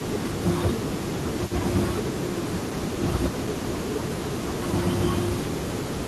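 From the start and through the whole clip there is an echo leak. A faint delayed copy of the speech trails it by 309 ms. It sits roughly 15 dB below the direct speech. It sounds like a second voice just behind the first. The likely cause is a far end playing the call on a loudspeaker, with an echo canceller that failed to remove all of what its microphone caught and sent it back.

Speech is suppressed in double talk five times: 0.35 to 0.78 s, 0.94 to 1.27 s, 2.6 to 2.76 s, 3.8 to 4.81 s, and 5.46 to 5.9 s. In each, the speech dips by up to about 10 dB and sounds pushed back. The longest stretch is 3.8 to 4.81 s. These are likely moments when both sides spoke at once, and the echo canceller turned down the talker along with the echo.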